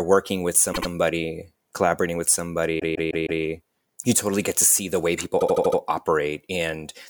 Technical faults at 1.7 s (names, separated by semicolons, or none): none